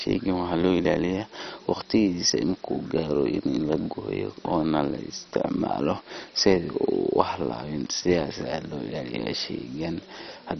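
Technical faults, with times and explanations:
Throughout, likely MP2 compression: the speech sounds dull, gurgling and granular, fitting a bit rate near 32 kbps where upper sub-bands are starved of bits. A spectrogram shows nothing above 6.1 kHz, with the remaining bands flickering as patchy blocks.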